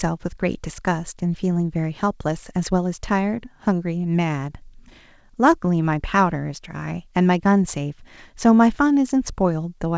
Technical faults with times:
none

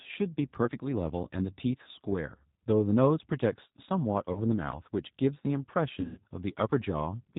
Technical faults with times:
0.00-7.39 G.729 codec
4.33-4.41 VoIP packet loss concealed by the speech codec
6.01-6.20 VoIP packet loss concealed by the speech codec

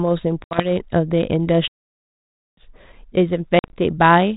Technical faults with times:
0.44-0.72 packet loss on an ADPCM call
1.68-2.57 playback stall
3.59-3.76 packet loss on an ADPCM call

